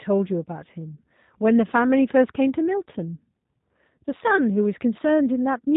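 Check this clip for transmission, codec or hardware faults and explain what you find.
One codec fault runs through the whole speech clip. Throughout, the G.729 codec rebuilds speech from a filter model and sparse pulses, leaving a rough, synthetic edge and nothing above 3.8 kHz, which fits 8 kbit/s coding. Plain band-limiting would not add that roughness.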